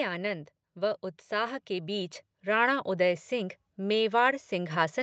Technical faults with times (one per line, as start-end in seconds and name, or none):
0.60-5.03 automatic gain rising